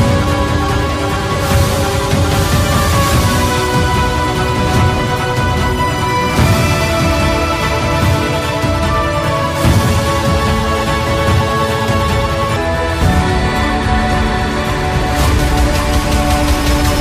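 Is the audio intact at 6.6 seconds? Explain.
No. At 6.6 seconds the audio sits inside a section at the wrong speed, running from the start to 12.56 s. It plays 1.34 times faster than it should, most likely because it was resampled or played against the wrong clock, so everything sounds hurried and raised by about five semitones. Unlike a pure pitch shift, timing and pitch move together here, and both snap back to normal after 12.56 s.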